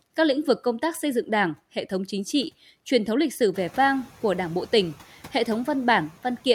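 In this speech recording, the background noise jumps by about 17 dB at roughly 3.5 s, to around 21 dB below the speech, and bursts through at first. Between 3.53 and 3.79 s it then sinks by about 4 dB. That dip is the noise suppressor catching up: its noise estimate was tuned to the quieter room, so the louder room noise passed with less reduction until the estimate adapted over roughly 260 ms.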